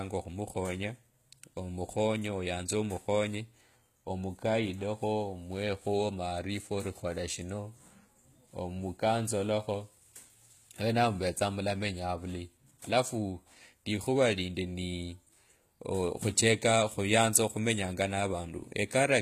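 It's a speech clip with HE-AAC compression damage audible the whole way through. The top of the spectrum stops dead at 14.9 kHz, and the treble below that has the synthetic sheen of spectral band replication, likely from HE-AAC at a low bitrate, something like 20 kbps. Lower bands get copied upward and shaped only roughly, so the harmonics don't line up across the crossover and the s sounds come out gritty and lispy.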